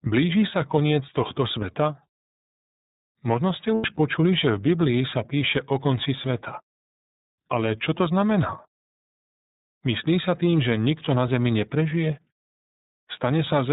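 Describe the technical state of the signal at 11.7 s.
At 11.7 s you're hearing the iLBC codec, and it's there for the whole clip, not just that moment. Everything above 4 kHz is gone, so the speech sounds narrowband and boxed in. Each 30 ms frame gets its excitation coded independently of the previous one, which leaves the voice clear but plainly rough and a bit synthetic. That roughness fits iLBC's 13.33 kbps mode.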